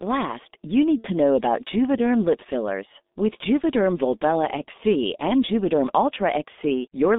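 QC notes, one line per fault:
Throughout: G.723.1 codec. The speech sits in a narrow telephone band of roughly 200 Hz to 3.7 kHz, so there is no air above it and it sounds muffled. At 6.3 kbit/s with 30 ms frames, the codec's vocal-tract model refreshes too slowly to track fast articulation. Consonants smear into neighbouring sounds and voiced passages take on a hoarse, rough texture. The coding damage is heavy and constant across the whole clip.
0.98–1.11 s: VoIP packet loss concealed by the speech codec. About 60 ms of audio, consistent with two lost 30 ms frames, is missing. The decoder fills the gap by repeating its last pitch and spectral envelope at falling gain, so the sound stretches into a buzzy tone or coloured noise that fades. Because each frame is predicted from the previous one, the speech stays weak or distorted for tens of milliseconds or more after normal packets resume.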